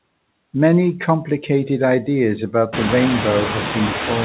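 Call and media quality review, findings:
Noise suppressor artifacts, whole clip: background pulled down about 21 dB between phrases, swelling back under speech; artifacts strongest after room noise rises around 2.5 s to about 6 dB below speech. Spectrogram: pumping noise floor; band empty above 4 kHz, consistent with a narrowband G.711-type call path.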